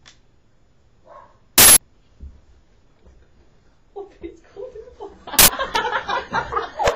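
An uninitialised buffer is heard at 1.58 to 1.77 s and again at 5.39 to 5.48 s. Each time, a block was sent to the output before any audio had been written into it, so whatever stale memory it held was played as samples. The result is a sudden, loud burst of digital noise. The first lasts about 186 ms, which fits an 8192-sample block, and the second about 93 ms, which fits a 4096-sample block.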